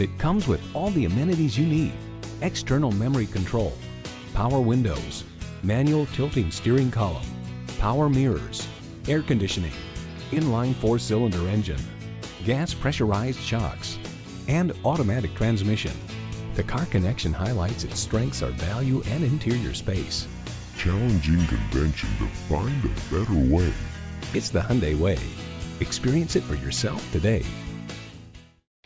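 A wrong sample rate fault runs from 20.28 to 24.35 s: the sound slows to 0.726 times its speed and drops about 5.55 semitones together. This fits audio recorded at 22 kHz being played back at 16 kHz without conversion.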